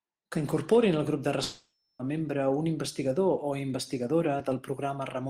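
Speech clip with a long network dropout from 1.43 to 2.02 s, after "incorporin al grup de" and before "a membre un investigador". For about 0.56 s the last sound is stretched into a fading buzz, with no true silence, and the lost audio never returns, most likely from packet loss.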